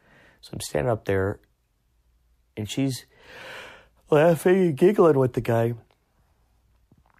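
Speech recording with no audible technical faults anywhere.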